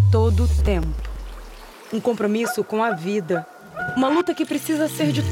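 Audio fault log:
0.34–1.48 s: CD scratch ticks. Eight regular ticks, about seven per second, the longest only a few milliseconds. A surface blemish passes the laser once per disc rotation, exceeding error correction, so the player briefly interpolates or mutes the damaged samples.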